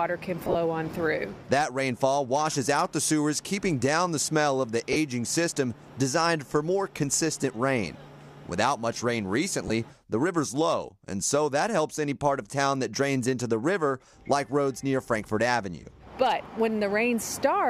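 Lost LE Audio frames break the sound at 0.45 to 0.56 s (scattered dropouts, longest about 30 ms), 4.93 to 4.96 s and 9.68 to 9.70 s. The decoder fills each gap with the previous spectrum under random signs, heard as brief noisy smears. Spectrograms show smeared, blurred patches replacing harmonic detail.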